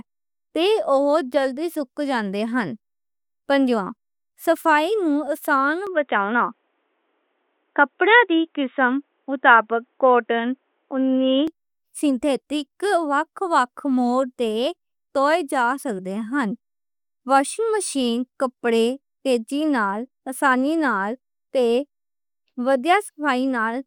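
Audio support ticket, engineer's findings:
Input switched to a poorer device, 5.87 to 11.48 s. Speech goes dull and boxy, nothing above 3.8 kHz. Level shifts by about 5 dB, faint new noise floor well under the speech. No gap at either switch. Likely cause: capture moved to a narrower-band mic or headset call profile, then back.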